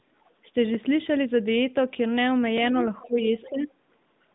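Right at the start, around 0.24 to 0.30 s, there's a faint scrap of a second voice sitting far below the main talker, roughly 40 dB down. It's the other side's voice leaking through, most likely because the far end was playing on a loudspeaker and the echo canceller didn't scrub all of it from the mic. It comes back much louder from 2.69 to 3.08 s, only about 15 dB under the talker, and again briefly at 3.42 to 3.50 s at around 20 dB down.

Overlapping the end of that louder leak, from 3.06 to 3.30 s and again from 3.50 to 3.70 s, the talker's own speech suddenly drops away. The first dip is about 15 dB and the second about 10 dB, and each lasts a fifth of a second or so. That's speech suppressed in double talk. With both sides talking at once, the canceller likely couldn't tell its own talker from the echo, so it ducked everything. You hear the talker's level sag in those spots.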